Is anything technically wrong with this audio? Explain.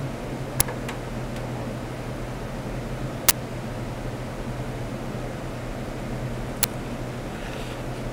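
Yes. Uninitialised buffer faults occur at 0.60 s, from 3.29 to 3.31 s, and at 6.63 s. Each time, a block played before audio was written to it, so leftover memory became samples: a brief, loud crack or burst of digital noise. Lengths of roughly 6, 23 and 12 ms fit 256-, 1024- and 512-sample blocks.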